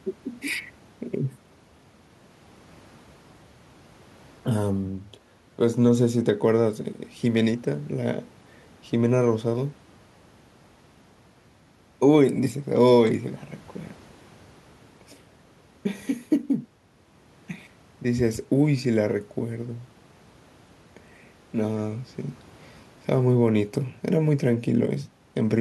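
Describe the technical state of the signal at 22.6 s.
At 22.6 s the speech signal is intact, with no audible technical fault at that moment.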